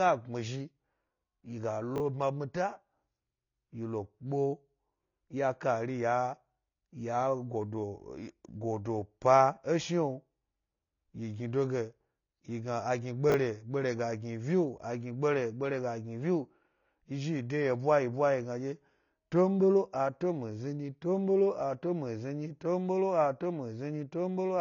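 From the start, the speech is dull, with nothing above about 7 kHz and a smeared, warbling edge on sibilants and held sounds. This is likely AAC compression, and the plainly audible damage fits AAC-LC at a low bitrate around 24 kbps.

At 1.96 to 2.00 s and again at 13.30 to 13.34 s, chunks are out of order: a 20 ms chunk plays one slot late, after the one meant to follow it. Each swap gives a brief jumbled blip at the hard joins.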